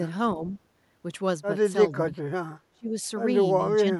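An echo canceller that likely could not tell its own talker from loudspeaker echo during moments of double talk keeps turning the speech down in this speech recording, so the speech is suppressed in double talk four times: briefly at 0.35 to 0.42 s with a slight dip, at 1.94 to 2.18 s with a clearer drop, at 2.73 to 2.96 s where the level falls deeply, by about 25 dB, and from 3.74 s to the end with a moderate dip. An echo canceller also likely failed to remove everything its microphone picked up from a loudspeaker, causing an echo leak at 0.50 to 0.54 s. A copy of the voice played on the loudspeaker, delayed by 399 ms, comes back for that short moment, very faint at roughly 35 dB below the direct speech, heard as a brief, quiet ghost.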